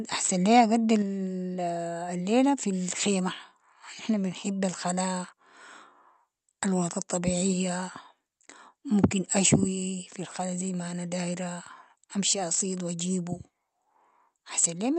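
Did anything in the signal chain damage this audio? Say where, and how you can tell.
Yes. The converter suffered a likely microphone overload: peaks ran about 4 to 8 dB past full scale at 0.24–0.6, 9.03–9.05, 12.3–12.61 and 14.59–14.66 s, flattening them into harsh crackle.

Call processing then stepped the microphone volume down, likely reacting to that first overload. At 1.02 s the whole signal, background included, drops about 4 dB at once.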